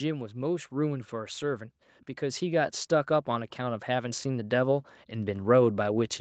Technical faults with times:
2.20-6.08 automatic gain rising

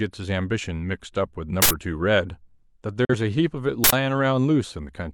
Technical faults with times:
1.62-1.71 uninitialised buffer
3.05-3.14 digital broadcast dropout
3.84-3.93 uninitialised buffer

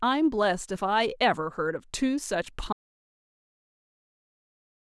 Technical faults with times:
2.73-4.96 audio dropout to silence

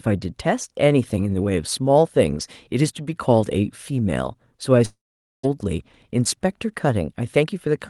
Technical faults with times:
4.85-5.45 long network dropout
7.37-7.68 jitter buffer speed-up

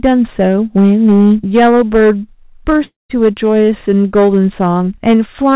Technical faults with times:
0.00-5.55 hard clipping
2.84-3.11 long network dropout

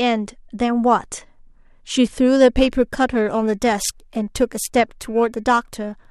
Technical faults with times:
2.50-6.11 periodic clock jitter

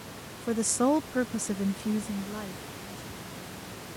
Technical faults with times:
none

